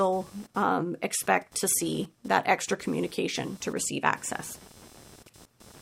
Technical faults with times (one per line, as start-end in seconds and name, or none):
0.00-5.81 computer activity noise